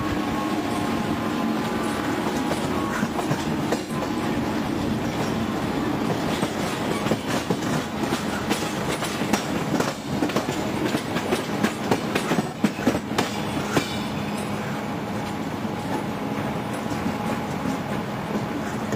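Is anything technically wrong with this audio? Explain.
Yes. Two brief patches, at 3.81 to 3.92 s and 12.42 to 12.54 s, turn smeared and noisy for about 85 ms each. This is AAC frame loss with concealment. The length fits two lost AAC frames, which the decoder filled by re-synthesising the last good spectrum.

From 13.72 s to 18.84 s, a train of clicks ticks over the audio at roughly seven per second, unevenly spaced, some forty in all and peaking about 5 dB above the signal. Their matching shape suggests a likely source in electrical interference or a faulty connection.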